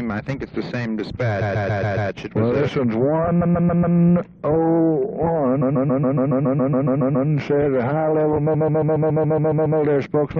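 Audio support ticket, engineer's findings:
Repeated frames: stutter at 1.41–2.10, 3.40–3.96, 5.61–7.28 and 8.53–9.79 s. A 139 ms block replays 4 to 12 times, consistent with a six-frame run rewritten or resent before decoding, lengthening the audio.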